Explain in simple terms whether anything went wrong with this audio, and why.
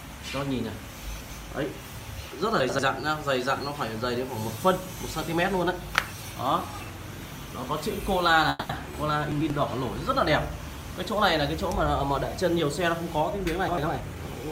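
Chunks out of order occur at 0.93 to 1.30 s, 2.60 to 2.79 s, 9.32 to 9.50 s and 13.68 to 13.87 s. Short pieces, about 93 ms each, play late, so the sound jumbles. Nothing is lost.

A call audio freeze occurs at 8.49 to 8.71 s. The last sound stretches into a fading buzz or hiss for about 200 ms, likely because packets were held up, then resumes without skipping or reordering anything.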